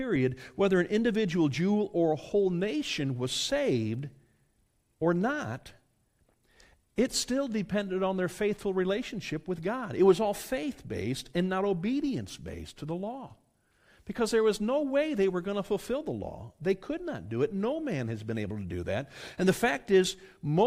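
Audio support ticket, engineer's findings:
No dropouts, clipping, glitches or level faults found on the speech path; the signal arrives intact with no defect audible anywhere in the clip.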